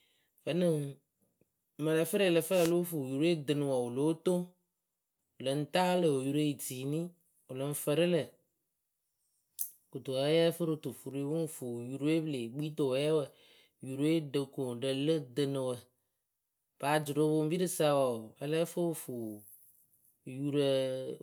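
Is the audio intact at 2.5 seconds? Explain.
No. At 2.50 s the radio link of an analogue FM wireless microphone fades, as reflected copies of the signal arrive out of phase and partly cancel at the receiver. With the wanted carrier weakened, the receiver's own noise climbs and breaks through. The result is a wireless microphone noise hit running to 2.73 s: a brief swish of static, roughly a quarter of a second long, laid over the speech.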